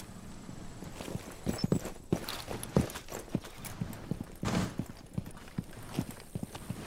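From about 3.38 s to the end, there's sample clock jitter: the converter's clock wanders by a few microseconds, so samples land slightly off time. That error sits roughly 30 dB under the signal, heard as a fizzy roughness that swells on loud, bright passages.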